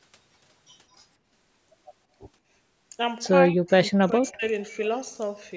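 Speech dips sharply from 3.49 to 3.71 s and again from 3.93 to 4.44 s, falling by around 40 dB, most likely speech suppressed in double talk by an echo canceller.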